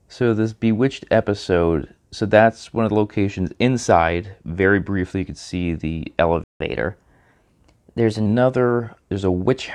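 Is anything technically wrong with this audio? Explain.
Yes, the speech has two playback faults. At 6.44 s a playback stall cuts the audio dead for about 166 ms, likely because the player ran short of data; the waveform shows a flat gap. From 6.60 to 8.26 s, catch-up at higher speed plays the backlog 1.1 times faster, raising pitch about one and a half semitones; spectrogram harmonics shift upward, then settle.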